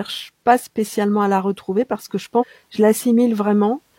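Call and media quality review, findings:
Damaged data in a compressed stream, 2.37 to 2.44 s: a short blip of about 66 ms mid-speech. Probable component is the decoder input. Corrupt bytes there, decoder misreads the frames, loses sync, then hunts for the next valid frame header. Worth checking the transport or storage path for where those bytes got mangled, since the decoder is just reacting to bad input rather than being the root cause.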